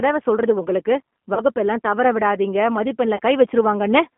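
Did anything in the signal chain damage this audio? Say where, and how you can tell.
Yes. Throughout, the speech sounds rough, slightly synthetic and thin, confined to roughly 200 Hz to 3.5 kHz. That is the G.729 codec at 8 kbit/s at the codec stage, rebuilding each 10 ms frame from a vocal tract filter, a pitch predictor and a few pulses.

At the network stage, the sound is stretched and fades between 1.34 and 1.41 s, after "சொல்றது உங்களுக்கு" and before "தவற விடாதீங்க", and again from 3.16 to 3.20 s after "தவற விடாதீங்க". This is VoIP packet loss concealed by the speech codec. About 30 ms went missing each time, which fits three lost frames, and the decoder extrapolated from its last state at falling gain.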